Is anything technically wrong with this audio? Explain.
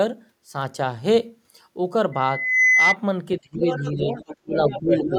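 Yes, there are three separate problems, all after the two-second mark.

From 2.12 to 2.96 s there's a loudspeaker feedback squeal at 2 kHz. The mic is hearing the speaker it drives and that loop runs away at one frequency, so a pure tone swells over about half a second until it's sitting roughly 5 dB above the speech.

Then the speech gets suppressed in double talk, from 3.39 to 4.15 s and again from 4.43 to 5.12 s. The talker dips hard, down by about 25 dB at worst the first time and about 20 dB the second, with roughly half a second affected the first time and about 0.4 s the second. The likely cause is the echo canceller failing to tell the talker apart from loudspeaker echo and turning everything down.

Overlapping that, the other side's voice is leaking through, from 3.6 to 4.37 s and then from 4.68 s to the end. It's a second voice, about 10 dB under the speech at first and only about 5 dB under later on. 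The likely culprit is the echo canceller leaving part of the far end's loudspeaker playback in the mic signal.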